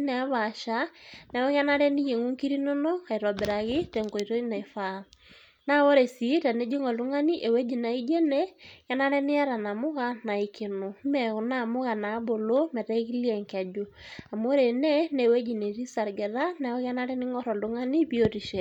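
The speech recording shows no technical faults anywhere in the signal.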